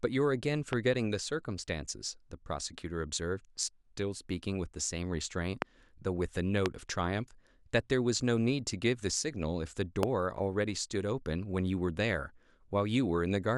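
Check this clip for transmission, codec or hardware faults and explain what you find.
The clip has four loud pops in the speech, at 0.73–0.75 s, 5.62–5.64 s, 6.66–6.68 s and 10.03–10.05 s. Each is a single pop, most likely from a sudden voltage step or pulse, such as a switch, static discharge or driver glitch, entering the signal path. The downstream circuitry shapes that pulse into a brief burst of about 20 ms. Each burst is a sharp click-thump roughly 20 dB above the speech, which continues underneath.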